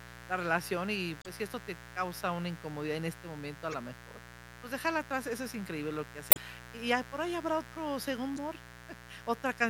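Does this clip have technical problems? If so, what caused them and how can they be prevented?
Yes. Mains buzz runs throughout: switching spikes from a 60 Hz supply leak in twice per cycle, leaving a raspy buzz only about 15 dB below the speech. Shielding cables, moving away from dimmers and using balanced connections prevents it.

Damaged data in a compressed stream appears at 1.21–1.26 s, 3.71–3.74 s, 6.29–6.37 s and 8.34–8.38 s: corrupted bytes make the decoder lose sync, producing brief glitches. Reliable transfer with checksums and error correction prevents it.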